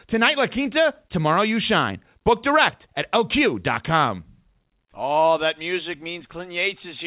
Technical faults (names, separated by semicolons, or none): none